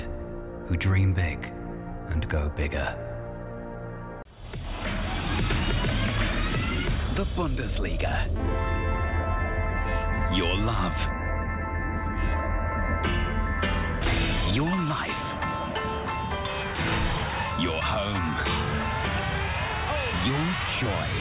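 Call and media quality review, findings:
Nothing to flag here; no audible faults anywhere in the recording, so no ticket items to raise.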